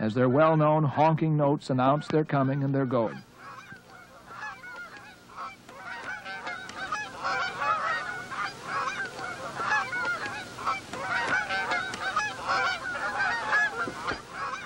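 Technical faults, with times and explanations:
3.03–3.08 s, 8.44 s and 10.67 s: damaged data in a compressed stream. Three short blips. The first lasts about 45 ms; the other two are under 20 ms each. At each point the compressed data the decoder received was wrong. It misread or rejected the frames there and lost sync while it searched for the next valid frame header. That gap is heard as a chirp, squawk, click or short hole.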